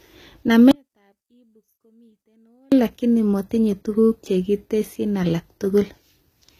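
From the first moment the speech has a gritty, metallic sheen on its sibilants, and s sounds come across lispy and smeared rather than crisp. The treble stays bright but does not belong to the voice, and nothing reaches above about 14.9 kHz. This is likely HE-AAC compression at a low rate, which fits a 20 kbps stream. Spectral band replication rebuilds the upper band by copying lower bands upward, so the harmonics fail to line up across the crossover.

At 0.71 s the speech cuts out abruptly and stays gone until 2.72 s, about 2.0 seconds. During that gap only a faint remnant of the sound remains, about 40 dB below its normal level. It then returns just as suddenly in mid-flow, with none of the shape of a natural pause or fade. This is an audio dropout to a faint residue, likely caused by losing the wanted signal while the path after the break stayed live and passed only that small leak.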